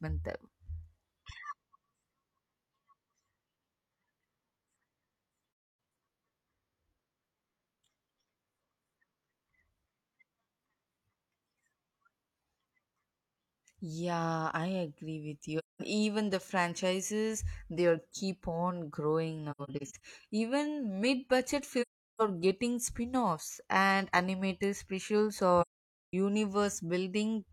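A speech recording with AAC frame loss with muting, which leaves soft-faded silent holes at 5.48–5.78 s, 15.59–15.81 s, 21.81–22.22 s and 25.61–26.14 s. At 19.51–20.04 s the holes are scattered, the longest about a tenth of a second. Missing frames were zeroed. On a spectrogram, each hole is a full-band blank column with tapered edges. On the waveform, the signal fades to a flat line.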